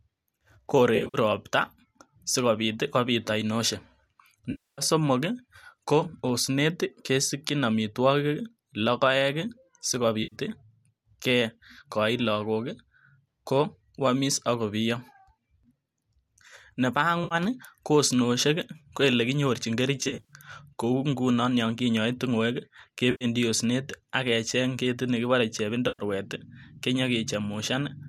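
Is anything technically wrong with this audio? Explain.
Yes. There is AAC frame loss with concealment seven times: 0.96–1.18 s, 4.51–4.82 s, 10.23–10.35 s, 17.24–17.35 s, 20.01–20.33 s (just after "ko elekinyorchin"), 23.11–23.25 s and 25.88–26.03 s. Chunks of the stream go missing, and the decoder patches them from the last good spectrum. Each loss runs 70 to 270 ms, and the gap pattern fits frames of about 10 ms. The first and fifth events are scattered dropouts, each run well under a tenth of a second. They sound like brief smeared, noisy, phasey patches. The light coding texture underneath is likely the low-delay AAC layer.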